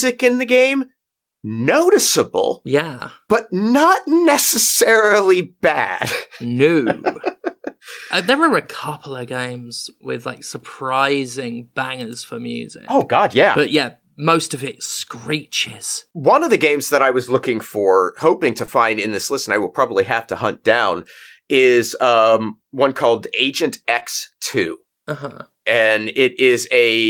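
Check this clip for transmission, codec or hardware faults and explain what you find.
Two short concealed packet losses show up in the speech. At 18.65 to 18.70 s, between "looking for hoping to" and "in this list and", and again at 23.99 to 24.03 s, about 20 ms of audio arrived too late, so the decoder extended the preceding sound to bridge the gap. You hear each one as a quick smear or wobble.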